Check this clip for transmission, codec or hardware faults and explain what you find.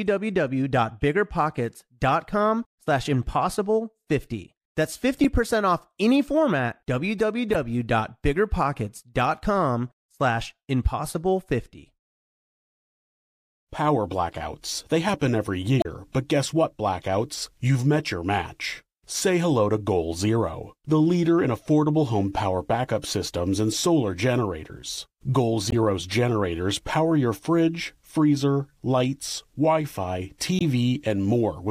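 The clip has damaged data in a compressed stream, heard at 5.24 s, 15.79–15.86 s, 25.70–25.74 s and 30.59–30.62 s. Corrupted bytes threw the decoder off its frame sync, so each spot produces a brief chirp or blip in the speech.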